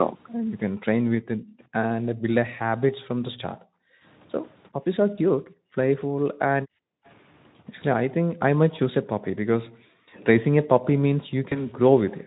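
Background gated by the echo canceller first appears at 1.36 to 1.59 s, then at 2.98 to 4.04 s, 4.73 to 4.79 s, 5.37 to 5.76 s, 6.14 to 6.37 s, 6.62 to 7.04 s and 9.67 to 10.14 s. Each time the loudspeaker played, the canceller pulled the microphone down, so the room tone sinks by up to about 40 dB. It vanishes for anywhere from a brief flicker to roughly 0.7 s, then swells back.

VoIP packet loss concealed by the speech codec hits at 5.15 to 5.19 s and again at 11.49 to 11.71 s. Each time a single 20 ms frame went missing. The decoder filled the gap by extending its last pitch and filter while fading the gain, leaving a brief smear. After each loss, the voice stays weakened for a short while as the decoder recovers frame by frame.

At 7.06 to 7.12 s a faint delayed copy of the sound returns about 389 ms late, at roughly 35 dB below the main signal, likely an echo leak. It suggests the canceller on the loudspeaker side let some of its microphone pickup slip through.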